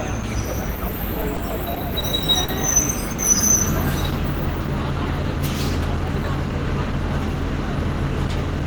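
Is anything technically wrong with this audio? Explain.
Yes. Between 1.21 and 2.04 s there are repeated stalls (stutter). Packets kept arriving late, so the jitter buffer emptied four times and the receiver stretched the preceding sound to cover about 70 ms, with no gap longer than 20 ms. Nothing drops out; the sound just hitches. Unlike a single stall, the hitches come in a cluster.

Two short stalls from a late packet follow, at 2.44 to 2.50 s and 3.12 to 3.20 s. Each is one isolated hold of about 40 ms and then 60 ms while a single delayed packet arrived. Playback then resumes where it stopped, so nothing is lost, unlike a dropout.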